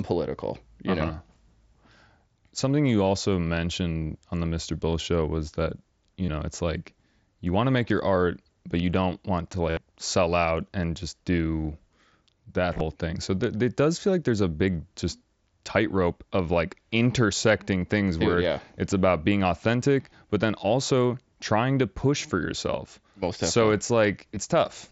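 Concealed Bluetooth headset packet loss at 6.26–6.28, 9.70–9.77, 12.75–12.81 (scattered) and 24.35 s: the receiver repeats recent waveform, giving a brief held buzz rather than a silent gap, with slight warble on recovery.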